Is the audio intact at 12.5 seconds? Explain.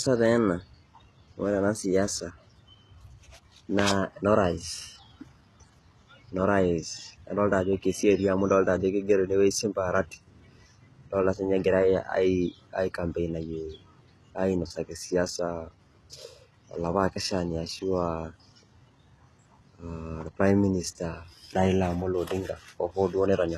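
No. At 12.5 seconds the speech carries HE-AAC compression damage, present across the whole clip. The treble is likely rebuilt by copying lower bands upward, which fits a low bitrate around 16 kbps. S sounds turn gritty and lispy. Nothing remains above 12.3 kHz.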